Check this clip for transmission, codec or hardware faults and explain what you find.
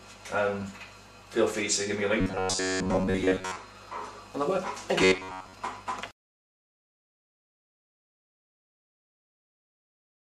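One fault type appears twice: robotic sound from repeated short buffers, from 2.21 to 3.57 s and again from 5.02 to 5.53 s. In both stretches the audio takes on a rigid, metallic buzz pitched at 93.8 Hz, which roughly follows the shape of the underlying sound. That pitch corresponds to a repeat period near 10.7 ms. The likely cause is late-arriving data being covered by looping the last short buffer, so most of the real audio in those spans is replaced by repeats.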